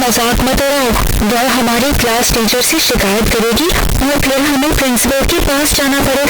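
From start to finish, 16-bit samples were likely read with signed and unsigned mixed up, so every zero crossing leaps across the full range, producing harsh, blaring distortion with quiet moments as loud as speech.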